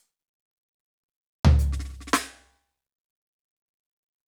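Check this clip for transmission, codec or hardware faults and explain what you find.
No faults found in this music.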